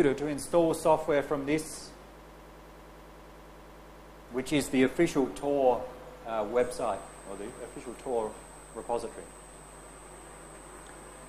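From 2.21 s to 4.28 s the audio catches on a single 0.1 s fragment and repeats it exactly, back to back, about twenty times, producing a rapid mechanical stutter that buzzes at roughly ten repeats a second. This is a broken-record loop: the player, encoder or stream likely stalled and kept resending the last piece it held. Whatever should have played during those two seconds never arrives.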